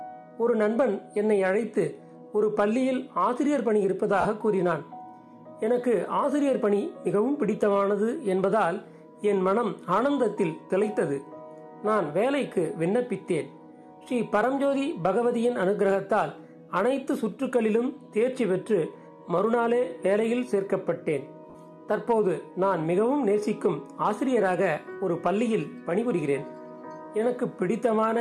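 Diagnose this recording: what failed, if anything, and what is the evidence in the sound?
The fault sits in the codec stage, on the Bluetooth LE Audio link: lost LE Audio frames, twice. Around 4.21 to 4.25 s, about 40 ms of sound turns into a noisy smear, and again around 21.50 to 21.55 s, for about 50 ms. Those lengths fit runs of four and five 10 ms frames. The LC3 decoder papered over the gaps by replaying the last good spectrum with randomised signs, so tonal detail washes into noise until real frames arrive again.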